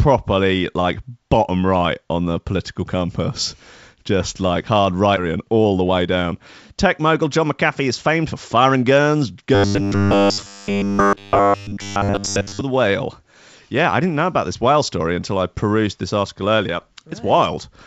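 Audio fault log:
5.17 s: skip ahead. Playback jumps forward with no gap and roughly 0.7 s of speech is lost, because audio already waiting was dropped so the stream could catch up. The two sides of the cut join almost directly, and delay falls by about the same amount.
5.25 to 6.34 s and 7.06 to 9.16 s: jitter buffer speed-up. The receiver was holding more audio than it wanted and trimmed short pitch-period pieces over and over, running at 111% and then 107% speed. Roughly 150 ms goes in each stretch, so speech sounds hurried at unchanged pitch.
9.55 to 12.62 s: robotic sound from repeated short buffers. For about three seconds the speech turns into a rigid, metallic buzz near 100 Hz that still roughly follows the talking. It is likely caused by audio arriving too seldom and a 10 ms buffer being replayed repeatedly in place of the real signal.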